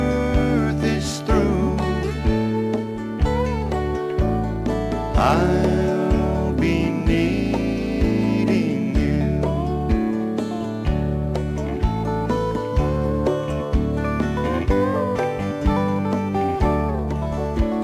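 No technical faults can be heard anywhere in this audio.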